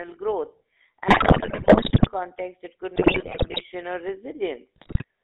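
A buzzy, gravelly roughness runs through the whole speech clip, band-limited to about 250 Hz to 3.7 kHz. This is the GSM full-rate codec, which fits a 13 kbps stream: it rebuilds the voice from a vocal-tract model driven by coarse pulse excitation.

Squawks, pops and gargling break in from 1.08 to 2.09 s, just before "it could"; again from 2.96 to 3.64 s, just after "it could"; and from 4.76 to 5.04 s. These are GSM bit errors, where corrupted filter, pitch and gain values reach the decoder and distort the spectrum and level frame by frame.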